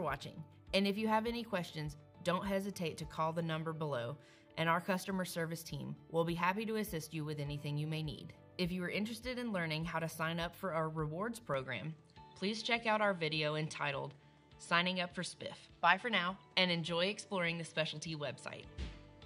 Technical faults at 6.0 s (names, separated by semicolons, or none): none